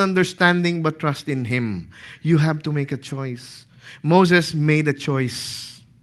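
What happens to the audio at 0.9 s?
Nothing goes wrong at 0.9 s: the speech passes through intact, with only the ordinary coding of the call path, whose upper range stops around 12 kHz.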